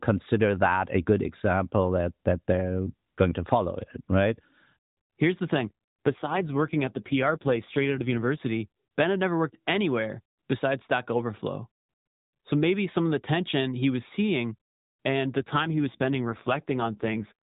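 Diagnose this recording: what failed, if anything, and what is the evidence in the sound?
AMR rate drop at the codec: speech goes buzzier at 5.54–8.43 s and 15.38–17.33 s, like a weak link forced 12.2 down to 5.9 kbps.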